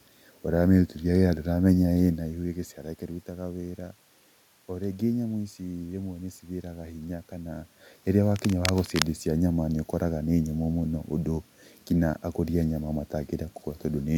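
At 8.35 s, right after "cithiraga hinya kana rĩrĩa", a burst of scratching and rustling sits over the speech until 9.03 s, roughly 10 dB below it. This is cable scratch noise, most likely from a worn cable or connector being disturbed so its contact resistance jumps about. Unlike the room noise, it is dense, irregular and brief. Unlike the level swings near 2 s and 7 s, where the talker moved, it adds crackle instead of changing loudness.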